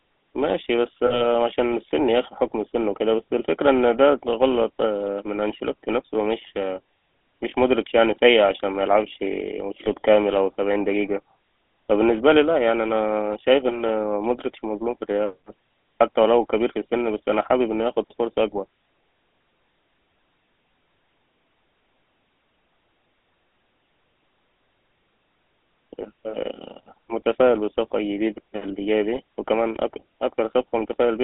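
From start to finish the speech has the buzzy, gravelly roughness of the GSM full-rate codec, which fits a 13 kbps phone stream. The codec models the vocal tract and drives it with a sparse, regular pulse train, so fine voice detail becomes a coarse rasp rather than the watery swirl of a modern low-bitrate codec. The damage is plainly audible, and the narrow line band runs from about 250 Hz to 3.6 kHz.

At 1.06 s and again at 9.84 s come lost GSM frames. The decoder fills each gap by repeating the last good frame's settings, so the sound briefly freezes into a rough, metallic ring instead of dropping to clean silence or clicking as a plain dropout would. The first loss covers about 40 ms, lasting until 1.25 s, and the second about 20 ms, lasting until 9.89 s. Both are too short to fade out fully.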